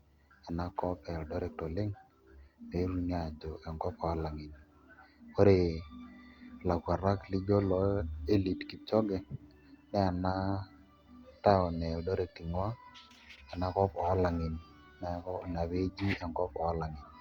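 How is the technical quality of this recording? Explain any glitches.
No glitches can be heard.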